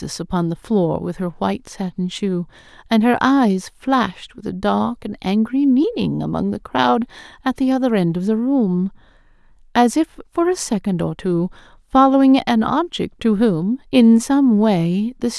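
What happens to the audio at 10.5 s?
Nothing goes wrong at 10.5 s; the speech carries on intact through that moment.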